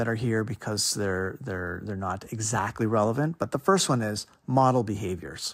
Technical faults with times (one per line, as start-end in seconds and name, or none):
0.13-5.54 clock slip clicks